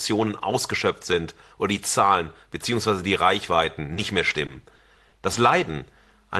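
From 3.82 to 5.36 s the speech shows repeated packet loss (robotic sound): eight gaps in quick succession, the longest about 40 ms, totalling around 150 ms, or about a tenth of that span. Each hole is patched by extending the preceding sound, only for the next loss to arrive soon after, so the passage turns choppy with fragments missing. Roughly 70 ms of that is rebuilt by the concealment. The call path's band limit near 12 kHz, consistent with Opus at a modest bitrate, applies throughout.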